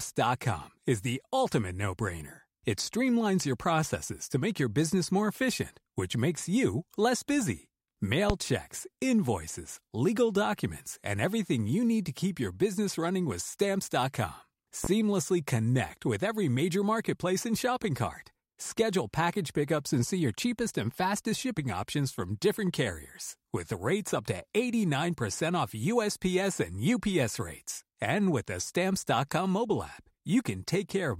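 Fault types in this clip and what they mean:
Loud pop: at 8.30 to 8.33 s and again at 14.84 to 14.88 s, a single sharp pop cuts through the speech, the first roughly 20 dB above the surrounding level and the second about 15 dB above it, each lasting around 35 ms while the talking continues underneath. The likely cause is a sudden electrical step or pulse, such as a plug, a switch, static or a driver glitch, summed into the signal and shaped into a brief thump by the downstream circuitry.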